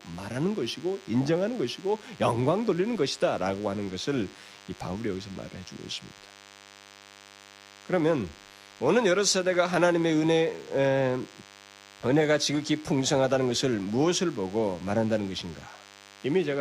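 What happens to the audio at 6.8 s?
DECT cordless phone buzz sits under the speech at 6.8 s, as it does for the whole clip. A nearby DECT handset or base station transmits a brief radio burst every 10 ms, and something in the audio chain rectifies that energy into the signal, producing a 100 Hz pulse train. It comes through as a thin, steady, harmonically rich buzz, roughly 25 dB below the speech, constant in pitch and never pausing between phrases.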